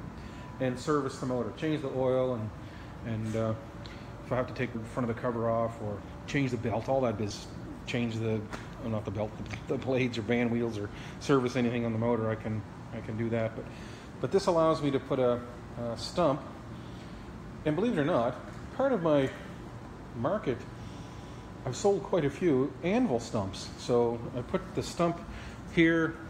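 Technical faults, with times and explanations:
4.74 s and 7.29 s, compressed frames skipped: each time the sound lurches forward and drops a stretch of audio, about a third of a second at 4.74 s and roughly half that at 7.29 s, leaving a short smeared blip rather than a sharp click. Whole compressed frames of about 23.2 ms, around fifteen and then around seven of them, never reached the output. The overlap between neighbouring frames softens each join into that brief smudge.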